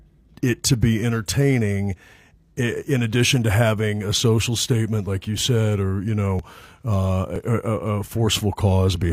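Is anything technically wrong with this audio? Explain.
Yes. At 1.42–1.45 s (after "to be"), 5.38–5.41 s (after "social statement like you"), 6.39–6.42 s (after "or you") and 7.36–7.38 s, there is overlap between stream segments. The time stamps of adjacent segments overlap, so the player discards 20–35 ms of speech that was never actually duplicated. Each cut makes the waveform jump, heard as a click or tiny skip. The spacing suggests segments of about one second.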